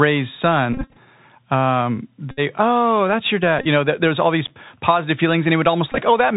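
Throughout the speech, the Bluetooth CVSD headset codec is plainly audible. One-bit delta coding at 64 kHz cuts everything above 4 kHz, so the spectrogram ends in a flat ceiling there over a grainy noise floor. Sibilants sound scratchy, and loud, bright sounds smear where the adaptive step can't keep pace.

Bluetooth headset packet repeats break in four times. The first, from 0.73 to 0.98 s, spreads about 154 ms of lost audio over 251 ms in runs of up to about 20 ms. The second, from 2.31 to 2.40 s just before "oh that's your", loses about 64 ms. The third, from 3.59 to 3.67 s between "oh that's your" and "you know", loses 45 ms over 68 ms. The last, from 5.92 to 6.00 s, loses about 34 ms over 60 ms. Each time the chip replays the previous packet's bits. The resulting buzz near 267 Hz shows as a harmonic comb on the spectrogram and as identical 3.75 ms waveform segments repeating side by side.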